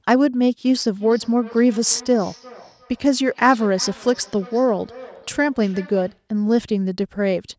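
From 0.88 s to 6.28 s there's a feedback echo between two devices: a second device in the room plays the call back into the mic, and its echo canceller can't catch that. The speech returns roughly every 0.4 s, thinner and ringing, peaking about 22 dB below the speech.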